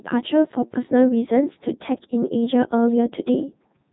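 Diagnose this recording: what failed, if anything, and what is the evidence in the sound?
The failure is at the codec stage: the speech has passed through the Codec 2 vocoder, and the damage is heavy across the whole clip. The voice sounds robotic and buzzy because the decoder rebuilds it from sine waves driven by pitch, voicing and envelope parameters rather than preserving the waveform. The character fits Codec 2's highest mode, around 3.2 kbit/s. A spectrogram would show nothing above 3.9 kHz and unnaturally regular harmonic stripes. The waveform would look smooth and synthetic.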